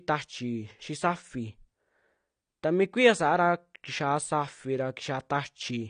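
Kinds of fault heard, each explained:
AAC compression: The speech sounds dull and smeared throughout, with a watery, fizzy texture on sibilants and held vowels, and nothing above 9.6 kHz. The likely cause is low-bitrate AAC-LC coding, consistent with a bitrate around 32 kbps. At that rate the encoder discards the top band and quantises the remaining frequency lines coarsely. On a spectrogram this shows as a hard ceiling at 9.6 kHz with patchy, blocky detail below it. The waveform shows little sign of it.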